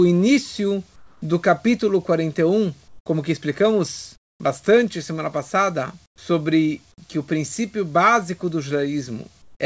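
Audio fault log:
0.96–1.22 s (before "do capítulo"), 2.88–3.06 s (before "que explicamos bastante semana"), 4.16–4.40 s, 6.06–6.18 s (after "explicamos bastante semana passada"), 9.42–9.60 s: comfort noise in place of the background. Each 120–260 ms pause becomes steady, featureless noise about 7 to 18 dB quieter, likely from discontinuous transmission with the receiver synthesising filler noise.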